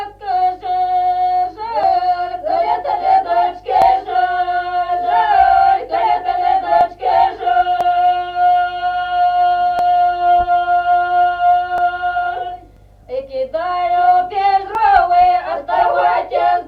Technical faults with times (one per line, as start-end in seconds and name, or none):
1.83 overlap between stream segments
3.82 overlap between stream segments
6.81 overlap between stream segments
7.81 overlap between stream segments
9.79 overlap between stream segments
11.78 overlap between stream segments
12.77 overlap between stream segments
14.75 overlap between stream segments